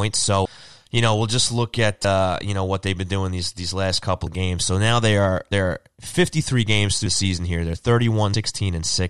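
The speech jumps ahead six times, at 0.45, 2.04, 4.26, 5.51, 7.06 and 8.34 s. Each is a case of compressed frames skipped. Whole blocks of coded audio never reach the output, so the talker lurches forward. The gaps are about 150 ms at 0.45, 5.51 and 8.34 s, and shorter elsewhere, near 50 to 70 ms. That fits runs of several 26.1 ms frames. Each join is a soft smeared blip, not a sharp click.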